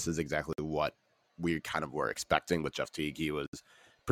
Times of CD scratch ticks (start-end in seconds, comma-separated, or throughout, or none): none